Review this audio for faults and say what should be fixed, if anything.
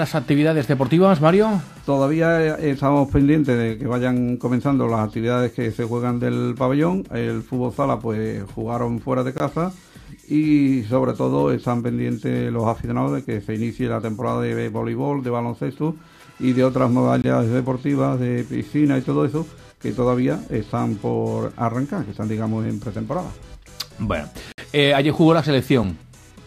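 Blocks of digital silence at 9.38–9.40 s, 17.22–17.24 s, 24.52–24.58 s and 25.83 s: output drops straight to silence and back with no fade, the 60 ms gap an audible hole.

To prevent these dropouts, give the audio processing more headroom (a larger buffer or less work per block) so every output block is filled in time.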